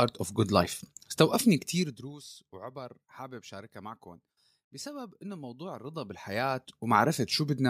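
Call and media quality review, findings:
Zipper noise, 1.72 to 2.18 s: rapid ticking as the speech drops by about 20 dB. Gain stage stepping in 1 dB increments, roughly fifty per second, unsmoothed. Zipper noise, 5.68 to 7.07 s: slower ticking, about fifteen steps per second, on a 20 dB rise. Same unsmoothed 1 dB gain steps.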